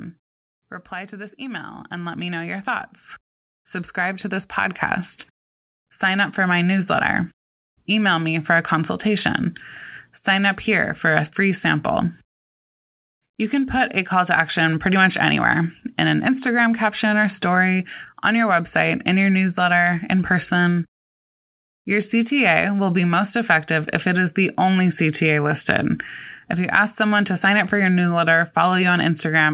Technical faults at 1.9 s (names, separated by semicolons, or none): automatic gain rising